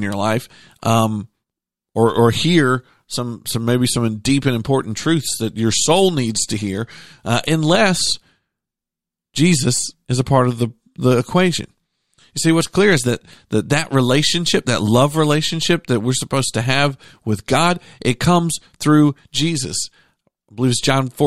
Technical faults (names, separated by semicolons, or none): none